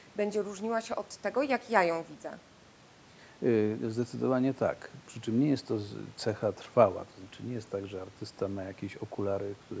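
No technical faults can be heard in the speech; the call microphone processing takes out only the lowest bass, and the room noise sits about 30 dB below the voice.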